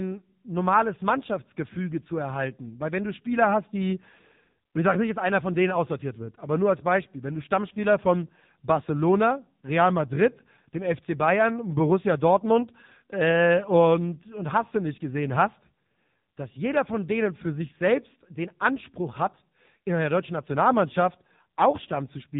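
From start to finish the speech has passed through the AMR narrowband mobile codec, the AMR-NB coder used for 2G and 3G calls, at a low rate that fits roughly 6.7 kbps. Each 5 ms is rebuilt from a vocal-tract model fed by only a few pulses, so the voice comes out buzzy and synthetic, with heavy coding damage. Nothing survives above about 3.8 kHz, leaving the sound muffled and telephone-like.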